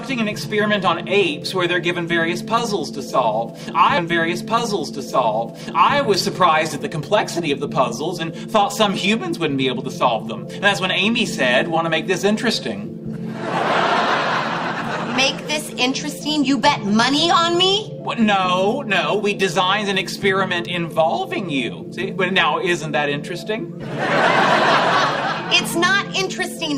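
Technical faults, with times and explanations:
3.97 to 5.97 s, stream segment repeated. Two seconds of audio play a second time, starting with a small blip at the jump back. The player fetched or queued the same stream segment twice, so that section recurs and the timeline runs two seconds long.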